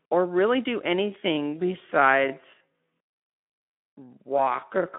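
From 1.0 s to the end, the audio was most likely time-stretched to 0.56 times speed with pitch held, so this time-stretched section drags. At 1.57 to 1.74 s, VoIP packet loss concealed by the speech codec fills a gap that fits one lost 20 ms frame. The Speex decoder extrapolates, producing a fading buzzy tone or coloured noise, and the narrowband 150 Hz to 3.5 kHz speech stays weak or distorted afterward.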